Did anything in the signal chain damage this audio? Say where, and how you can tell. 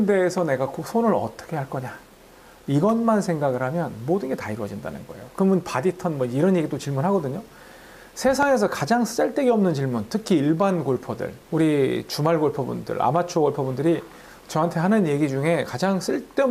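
Yes. Two loud pops sit on the audio at 0.38 to 0.40 s and 8.43 to 8.45 s. Each is a single sharp click, roughly 10 dB above the sound, which carries on underneath. A voltage spike from a plug, switch or static in the analogue wiring is the likely cause.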